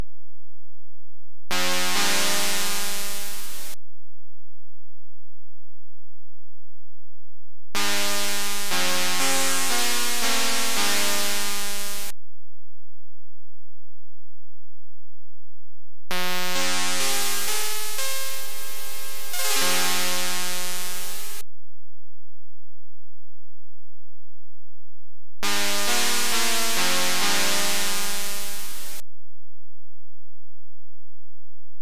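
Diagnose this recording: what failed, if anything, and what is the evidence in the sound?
Nothing stood out on listening that would point to a failure anywhere in the chain.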